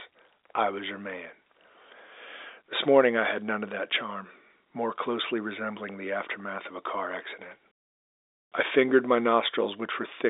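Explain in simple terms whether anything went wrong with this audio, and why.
Nothing went wrong with this audio, because the narrow, phone-like sound of the speech is simply how a normal telephone line carries it.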